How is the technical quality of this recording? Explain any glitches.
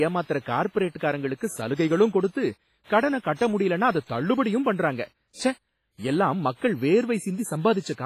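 The recording is heavily degraded by codec damage across the whole speech clip.

WMA compression, throughout: the sound rings and smears, with a washy hiss that swells and fades with the signal and nothing above about 15.4 kHz. The likely cause is a transform codec spreading quantisation noise over long blocks and zeroing weak components, which fits a low bitrate around 24 kbps.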